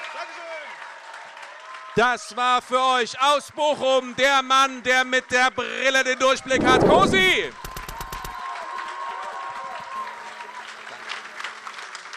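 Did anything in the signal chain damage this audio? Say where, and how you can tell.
Yes: GSM phone buzz in the analogue wiring, 9.96 to 11.79 s. It is a steady, harmonic-rich 217 Hz rasp about 32 dB below the signal, from a nearby handset's call bursts rectified by the audio circuitry.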